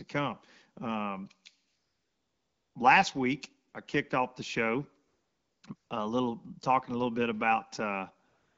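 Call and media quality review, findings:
AMR comfort noise. Background replaced by a steady, smooth synthetic hiss that switches in and out: 1.67–2.75 s, 3.69–3.73 s, 5.07–5.63 s, 5.75–5.89 s, 8.29 s to end. Longest gap about 1.08 s. Probable component: the sending handset's silence detection. It judged the talker silent, stopped sending speech frames, and the receiver synthesised noise from a coarse level-and-spectrum description. Wideband speech around these gaps sounds clear, consistent with AMR-WB at 12.65 kbit/s or above.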